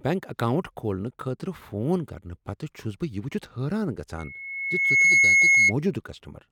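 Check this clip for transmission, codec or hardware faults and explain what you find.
One fault turns up, an acoustic one in the playback chain. From 4.18 to 5.73 s there's loudspeaker feedback squeal: the mic picks up its own speaker, and a 2.2 kHz tone swells over about a second to roughly 10 dB above the speech.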